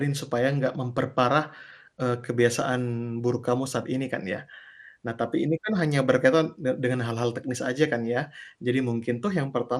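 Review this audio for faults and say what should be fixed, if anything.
Throughout, MP2 compression leaves the speech dull and gurgling, likely from a rate near 80 kbps switching off upper sub-bands; a spectrogram shows ragged, flickering high bands. Re-encode from the original source at a higher bitrate or with a more efficient codec.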